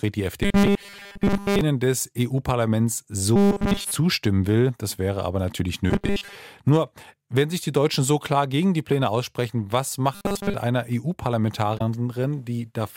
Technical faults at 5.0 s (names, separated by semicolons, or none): none